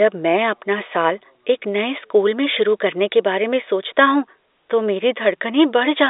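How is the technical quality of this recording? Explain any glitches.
No glitches to report: the speech comes over G.711 A-law telephone coding at 64 kbps, so the band sits between 300 Hz and 3.7 kHz with nothing above 3.8 kHz, and the codec leaves at most a faint trace.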